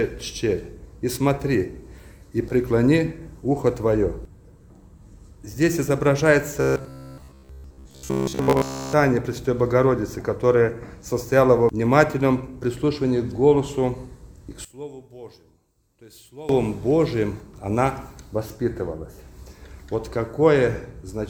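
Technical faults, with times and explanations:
6.61 to 8.93 s, robotic sound from repeated short buffers: the audio turns into a rigid, metallic buzz pitched at about 66.8 Hz that only loosely tracks the underlying sound. The likely cause is audio arriving too slowly, so playback keeps re-using the last short block, roughly 15 ms long to match that buzz, while the real material is skipped. Around seven tenths of this stretch is repeated rather than new, and the fixed repetition rate is heard as the buzz.
14.65 to 16.49 s, one channel inverted: the sound suddenly drops by about 21 dB, as if the centre of the mix had been scooped out. This likely comes from one stereo channel having its polarity flipped, so that when the channels are combined to mono, whatever they share cancels. Only the small difference between left and right survives, leaving a faint, weak residue for these 1.8 seconds.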